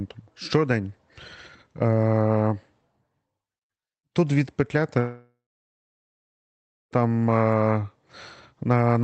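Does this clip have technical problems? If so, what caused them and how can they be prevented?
Yes. A long network dropout, likely a stalled connection, left no audio from 4.99 to 6.94 s: a fading buzz or hiss, then about 1.5 s of silence, and the speech resumes with that part gone. Prevent it with a steadier network link, for example wired rather than congested Wi-Fi, and enough bandwidth headroom for the call.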